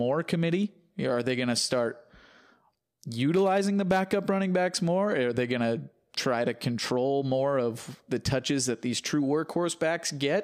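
No technical faults occur anywhere in this speech recording, so there are none to describe in time order.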